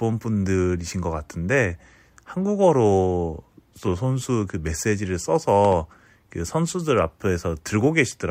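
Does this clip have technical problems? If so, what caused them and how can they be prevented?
Yes. At 5.65 to 5.75 s the speech is hit by a loud pop, really two sharp pops in quick succession, standing well above the talking, roughly ten decibels louder, while the speech carries on underneath. The likely cause is a sudden electrical step or spike, such as a connector being disturbed, a switch being flipped, or a static discharge, which the following circuitry shapes into a sharp pop. Securing cables, switching nothing mid-recording and grounding against static would prevent it.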